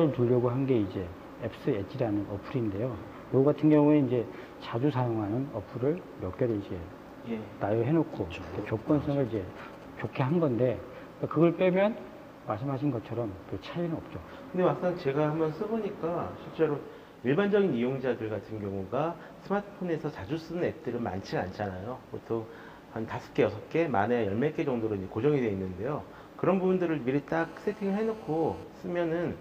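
From 8.64 to 10.31 s you get GSM signalling bursts: a nearby 2G handset doing its short handshake transmissions, which the audio circuitry rectifies. It comes through as a galloping dit-dit-dit of brief 217 Hz buzzes, sitting roughly 20 dB under the programme.

Then from 27.40 to 28.63 s there's proper GSM phone buzz, the phone now in a call and bursting continuously at 217 Hz. That gets demodulated into a steady, raspy, harmonic-heavy buzz at about 21 dB below the signal, with no relation to the audio underneath.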